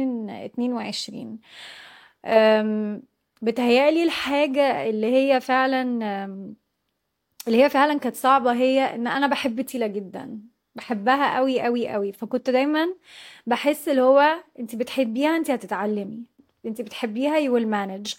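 No technical faults are audible anywhere in this speech.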